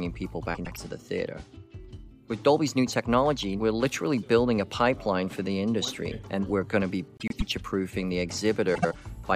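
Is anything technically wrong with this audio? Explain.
Yes. Frames out of order occur three times: 0.55 to 0.77 s, 7.17 to 7.42 s, and 8.75 to 8.95 s. In each, two adjacent blocks of about 104.5 ms (78.4 ms in the last) play swapped. The halves exchange, producing a garbled flutter without losing time.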